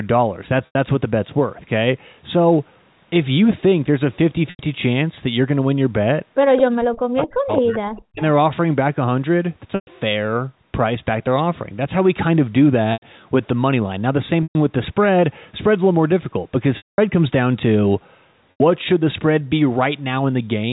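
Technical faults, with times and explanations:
0.66 s, 4.50 s, 9.75 s, 12.93 s, 14.43 s, 16.77 s and 18.51 s: packet loss with pitch repetition. Gaps of 90 ms occur at 0.66, 4.50, 12.93 and 18.51 s. Gaps of 120 ms occur at 9.75 and 14.43 s. The gap at 16.77 s lasts 210 ms. Packets dropped out in each case. The receiver filled each hole by looping the last pitch period, then faded it. The short gaps sound like a brief buzzy hold. The 210 ms gap fades toward silence before the sound returns.
6.57 to 6.62 s and 7.96 to 8.02 s: echo leak. A delayed copy of the sound appears each time, trailing the original by 218 ms. The first copy sits about 10 dB below the main signal. The second is faint, about 30 dB down. The likely cause is a loudspeaker on one end whose echo canceller let some pickup through. That residue was sent back down the line.
6.65 to 8.22 s: speech suppressed in double talk. Across this stretch the talker's level sinks and breaks up, for roughly 1.5 s in total. 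At its deepest the drop reaches about 40 dB. Here both ends were likely active at once. The echo canceller could not tell the local talker from the loudspeaker echo, so it pulled both down. The two echo scraps sit at the edges of this stretch.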